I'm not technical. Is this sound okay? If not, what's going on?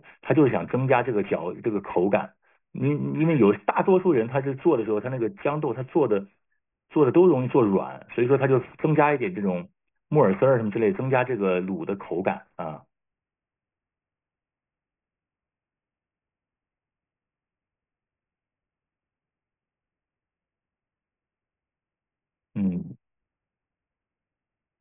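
No. Throughout the speech there is aliasing: high sounds above 3 kHz fold back into wrong pitches, making hisses gritty and metallic, consistent with careless downsampling to a 6 kHz rate.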